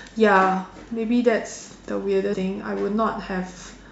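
At about 2.32 to 2.34 s there's a quick glitch, a burst of damaged data in a compressed stream lasting only around 20 ms. A stretch of the encoded speech got corrupted, so the decoder couldn't make sense of the frames there, lost its footing and had to hunt for the next valid frame header before picking the speech back up. That scramble is what you hear as the brief blip cutting across the speech.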